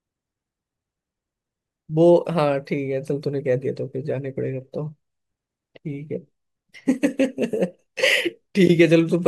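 No technical faults can be heard anywhere in the recording.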